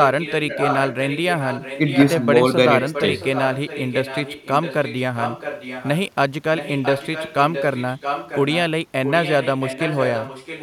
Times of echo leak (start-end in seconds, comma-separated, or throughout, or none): 0.00-2.26, 2.81-5.98, 6.57-8.56, 9.04-10.63